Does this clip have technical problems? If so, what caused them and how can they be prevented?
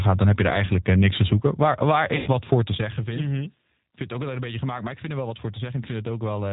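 Yes. The whole speech clip has passed through the G.729 codec, heard here as its 8 kbit/s low-complexity variant. Each 10 ms frame is rebuilt from a vocal tract filter, a pitch predictor and a few fixed pulses, and nothing above 4 kHz survives. The result is plainly audible: dull, slightly rough, synthetic-sounding speech. To prevent this, use a wideband codec such as G.722 or Opus when the network allows.

From 2.16 to 2.28 s there is VoIP packet loss concealed by the speech codec, just before "wat voor te zeggen". About 100 ms of audio is missing, which fits a run of roughly five 20 ms packets. The decoder fills the gap by repeating its last pitch and filter at a falling gain, so the speech is stretched into a fading buzzy tone or coloured noise, and it takes a moment to recover once packets return. To prevent this, reduce network congestion, prioritise voice traffic with QoS, and use an adaptive jitter buffer or forward error correction.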